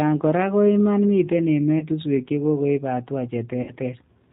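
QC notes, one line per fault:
Throughout: G.729 codec. The sound is band-limited, with nothing above 4 kHz, and has a rough, slightly synthetic texture from being rebuilt from a filter, pitch predictor and sparse pulses, which fits an 8 kbit/s codec. A spectrogram shows a hard ceiling at 4 kHz and coarse harmonics.
1.79–1.84 s and 3.62–3.74 s: VoIP packet loss concealed by the speech codec. Audio went missing for about 20 ms and then 60 ms. The decoder stretched its last pitch and filter into a fading buzzy tone or coloured noise, and the waveform decays smoothly. The spectrogram shows smeared, repeated harmonics.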